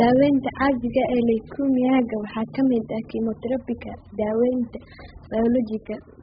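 Throughout the speech, the encoder has likely starved the AAC compression of bits, consistent with AAC-LC at roughly 8 kbps. Nothing survives above 5 kHz, so the sound is dull and smeared, with heavy warbling, fizzy artefacts on sustained sounds and sibilants.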